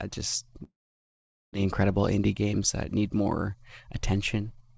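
From 0.64 to 1.57 s the speech breaks off in what is likely a long network dropout. The last sound lingers as a fading buzz or hiss, then silence. On a waveform the envelope decays to a flat line, and on a spectrogram smeared harmonics fade to a blank band.

Between 1.64 and 3.21 s a jitter buffer speed-up plays the speech about 6% fast, trimming roughly a tenth of a second in pitch-period slices. Pitch stays put, so it sounds hurried. Spectrogram harmonics hold their spacing while syllables compress, and the waveform shows tiny splices.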